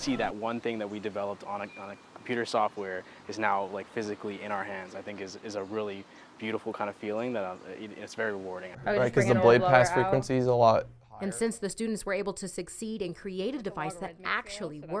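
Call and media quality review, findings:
No faults found in the signal path; level, continuity and timing hold steady across the whole recording.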